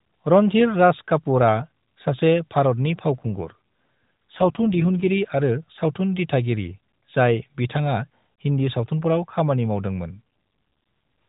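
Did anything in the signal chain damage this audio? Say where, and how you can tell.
Yes. An AMR rate drop at the codec stage, driven by the network, makes the speech rougher and more synthetic from 3.14 to 5.19 s and from 10.12 to 10.20 s. That fits a step down from 12.2 to 5.9 kbps. The band and continuity stay intact, which rules out dropouts or packet loss.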